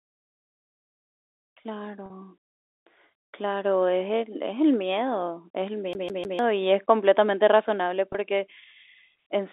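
At 2.06 to 2.10 s the sound briefly holds and turns slightly buzzy, as if one instant were sustained, and at 8.13 to 8.15 s the same thing happens more briefly. This is packet loss with pitch repetition. About 40 ms of audio went missing in the first gap, likely two 20 ms packets, and about 20 ms in the second. The receiver filled each gap by repeating the last pitch cycle, which produces the frozen, buzzy tone.

From 5.93 to 6.39 s the sound stutters quickly and evenly, with one fragment of about 0.15 s played three times in a row and a tiny mute at each restart. This is the CD stuck on one turn. A scratch keeps throwing the laser back to the same point on each rotation, so that short stretch loops like a skipping disc. Around it, the narrow telephone band of the G.711 line can be heard.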